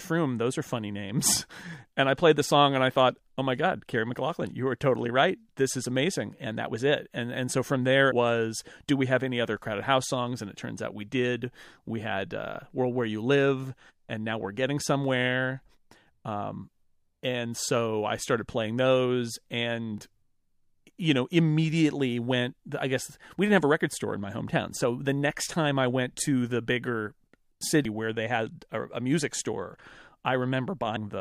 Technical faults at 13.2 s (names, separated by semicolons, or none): none